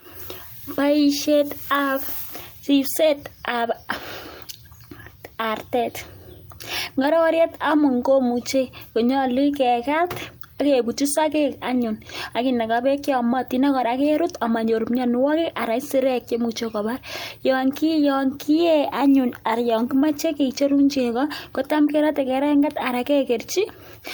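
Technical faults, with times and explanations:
Nothing in this speech recording stood out as a technical problem on listening.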